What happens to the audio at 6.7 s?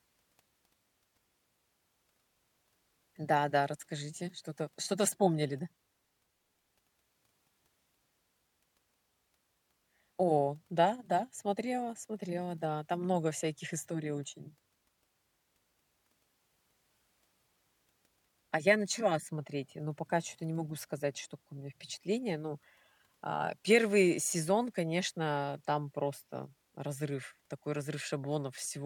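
Nothing goes wrong at 6.7 s; the speech carries on intact through that moment, with no dropout, click or other fault.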